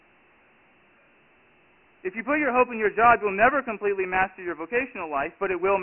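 From start to finish the speech sounds thin and dull, with nothing above 3 kHz and little below about 250 Hz, and a heavy gritty hiss trails every syllable. This is Dialogic VOX ADPCM: coarse 4-bit steps at a rate that points to 24 kbps.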